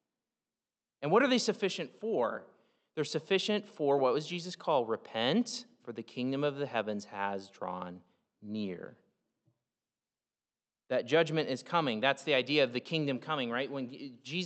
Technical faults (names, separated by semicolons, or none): none